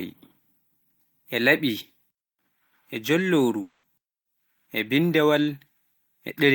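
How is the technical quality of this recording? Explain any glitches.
The speech has one clear glitch, a long network dropout from 3.61 to 3.85 s. For about 220 ms the speech is replaced by a continuation of the last sound, which turns into a smeared, fading buzz instead of proper speech. There is no dead silence. The speech then resumes mid-flow, with that stretch gone for good. The likely cause is a break in packet delivery, with the receiver's loss concealment filling the whole gap by extending the last received audio.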